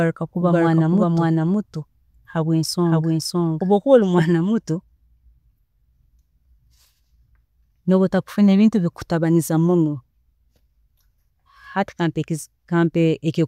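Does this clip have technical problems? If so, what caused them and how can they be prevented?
Yes. A doubled audio track is already under way at the start and stops abruptly at 4.22 s. A second copy trails about half a second behind, at roughly equal level. It likely comes from a slower second capture path. Mute duplicate inputs before recording.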